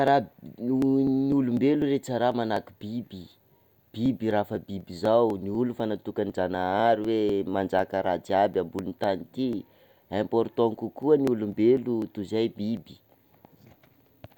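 From about 0.08 s to 14.26 s there are periodic USB or driver dropouts: something stalls the audio path every 0.25 s, and roughly a millisecond of speech gets skipped each time. That gives around fifty small, evenly spaced ticks, audible only while speech is present.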